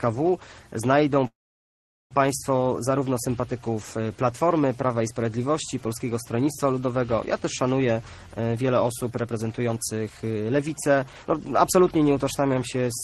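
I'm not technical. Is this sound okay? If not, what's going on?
No. From about 1.27 to 2.14 s the sound stalls: a brief buzzy smear of the last sound fades out, then there is near-silence for most of that stretch before it picks up exactly where it stopped. This is a call audio freeze, likely caused by packets of audio held up in transit so the receiver's waiting area, the jitter buffer, ran dry. Nothing is lost; a pause of about 0.8 s is inserted instead.

From about 8.47 to 11.26 s the sound runs noticeably quicker, about 11% faster, yet the pitch stays the same, so it feels hurried. This is a jitter buffer speed-up. Audio had piled up in the waiting area, and the receiver caught up by snipping out many tiny slices, roughly a third of a second in total, to bring the lag back down.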